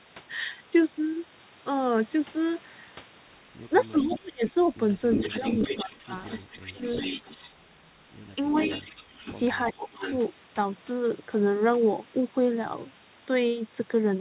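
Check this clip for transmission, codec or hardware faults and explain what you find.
Two faults recur through the speech: speech suppressed in double talk, and echo leak. The band stops at 4 kHz throughout, which fits a narrowband G.711-style call path.

Speech suppressed in double talk occurs at 3.91 to 4.47 s, 5.25 to 6.83 s, 8.85 to 8.93 s and 9.73 to 10.03 s. The likely cause is an echo canceller mistaking overlapping talk for echo and turning it down. The voice drops by about 30, 20, 5 and 15 dB.

Echo leak is heard at 4.01 to 4.52 s, 5.12 to 7.9 s and 8.47 to 10.17 s. A loudspeaker echo was likely not fully cancelled and was sent back. A delayed copy follows at 363, 389 and 434 ms. It sits about 10 dB below the speech, then about 15 dB below.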